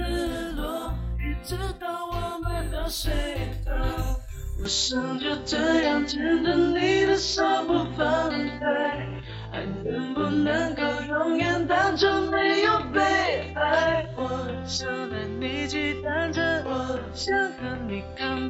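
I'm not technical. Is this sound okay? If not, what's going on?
No. From about 4.65 s to the end, the sound turns duller and boxier, with nothing above 7.6 kHz, and its loudness shifts slightly, with a faint new background noise underneath. There's no gap at the changeover. This pattern points to an input switched to a poorer device: the recording system likely changed mid-recording to a lower-quality microphone or headset, which passes a narrower range and brings its own tone and noise.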